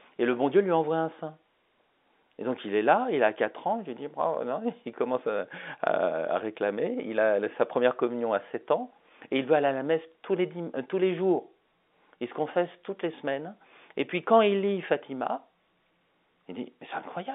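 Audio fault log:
No faults heard.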